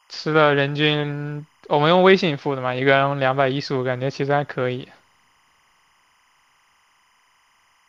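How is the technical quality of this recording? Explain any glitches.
The speech has one problem running the whole way through, timecode bleed. Behind the voice, from start to finish, there's a steady chirping warble. That's linear timecode from an adjacent track or cable leaking into the audio path. The code is a square wave flipping between two pitches an octave apart, here around 1 kHz and 2 kHz, and it runs at 25 frames per second. It sits roughly 40 dB below the speech.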